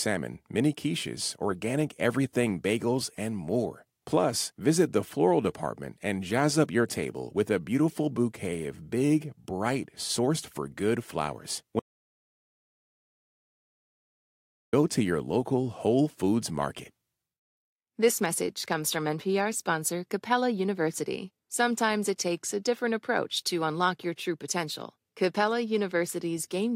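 From 11.80 to 14.73 s the speech cuts to silence with no room tone, an audio dropout to silence, likely from the input briefly disconnecting or muting.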